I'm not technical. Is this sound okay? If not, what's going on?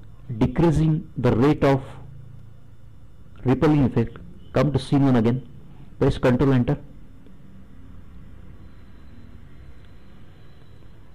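Yes, it sounds fine; nothing here needs fixing.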